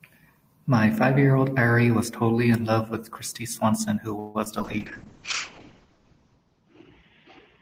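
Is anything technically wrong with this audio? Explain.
Yes. There are three kinds of fault, all clustered from about 4.2 s onward.

A call audio freeze runs from 4.19 to 4.37 s. The last sound is stretched into a fading buzz for about 0.15 s. The likely cause is delayed packets draining the jitter buffer. Speech then resumes where it stopped, now 0.15 s late, with nothing lost.

Short concealed packet loss follows twice, at 4.45 to 4.48 s and 4.60 to 4.62 s. Each time about 20 ms never arrived. The receiver briefly extended the preceding sound to bridge it, leaving a small smear or wobble. The second event also trims the delay slightly.

A call bitrate drop starts at 4.65 s and lasts to the end. The encoder falls from 32 to 7 kbps, holding the lowest rate for about 1.7 s. Bandwidth shrinks from 20 kHz to 8 kHz. Speech turns muffled and coarse.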